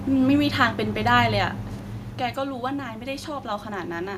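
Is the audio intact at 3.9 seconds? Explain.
No. Automatic gain rising runs from 2.34 to 4.13 s: after the input dropped about 11 dB, the control lifts gain about 5 dB, swelling voice and background together.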